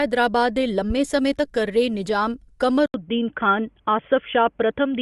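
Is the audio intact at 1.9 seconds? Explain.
No. At 1.9 s, as throughout the speech, the upper spectrum sounds breathy and grainy, noise-filled rather than detailed, likely Bluetooth LC3 compression, consistent with 10 ms frames near 48 kbps.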